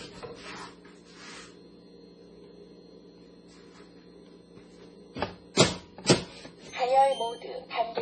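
MP3 compression damage runs throughout this recording of sounds: nothing remains above 10.5 kHz, and the heavy swirling artefacts likely come from a starved bitrate near 24 kbps.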